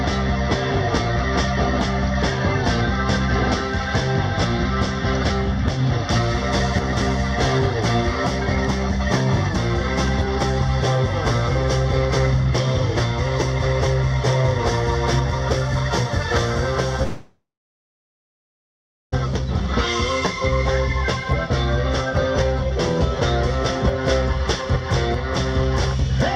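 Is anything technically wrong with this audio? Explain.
Yes. From 17.03 to 19.14 s there is a long network dropout: the stream likely stopped delivering packets for about 2.1 s, and that audio was never played. The receiver first extended the last sound it had, so a fading buzz or hiss trails off before roughly 1.7 s of silence or low steady noise takes over. The audio then resumes at 19.14 s, and the lost stretch is simply absent.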